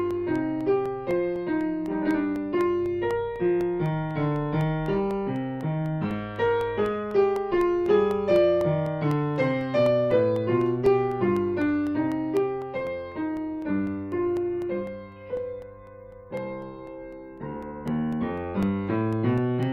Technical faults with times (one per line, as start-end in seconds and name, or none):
0.11-19.63 periodic USB or driver dropouts